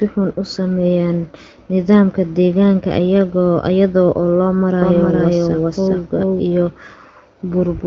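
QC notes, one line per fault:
4.82 to 6.40 s, doubled audio track: a second full-band copy of the speech runs about 400 ms behind at roughly equal level, with no decay or room colouring, and starts and stops abruptly. This is likely a slower capture path or an edit layering two copies out of step.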